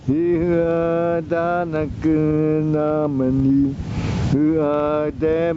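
Gain pumping runs throughout: the gain ducks by roughly 20 dB under each loud sound, likely from gain set too high feeding a fast limiter. The waveform looks flattened and squashed, and the spectrogram shows nothing above 8 kHz.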